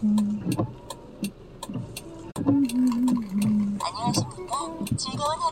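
Sounds with a brief fault from 2.31 to 2.37 s: corrupt frame concealment, where the decoder covered a few damaged AAC frames instead of producing a squeak.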